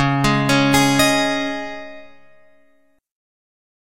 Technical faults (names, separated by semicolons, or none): adaptive stream at a lower bitrate